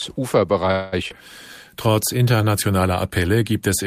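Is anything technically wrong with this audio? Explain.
Yes, three network-related faults affect this speech clip.

From 0.71 to 0.94 s there is a call audio freeze. Delayed packets likely drained the jitter buffer, so the receiver extends the last sound as a fading buzz for about 210 ms. The speech then resumes exactly where it stopped, with nothing lost.

At 1.08 to 1.12 s comes a skip ahead. A short stretch of audio, about 70 ms, was dropped while later packets were already queued, so the speech jumps forward with an abrupt splice.

From 1.70 to 2.42 s a jitter buffer slow-down rebuilds reserve by repeating pitch periods. This adds 80 ms, so the speech plays at 90% speed at unchanged pitch and sounds slightly drawn out.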